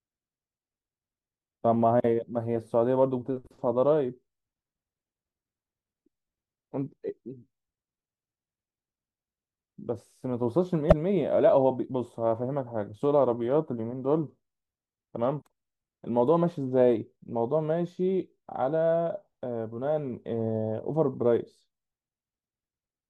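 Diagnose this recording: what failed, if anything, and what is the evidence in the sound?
Damaged data in a compressed stream, at the codec stage. Brief glitches at 10.88–10.93 s and 15.38–15.42 s. Corrupt frames broke decoder sync until the next frame header.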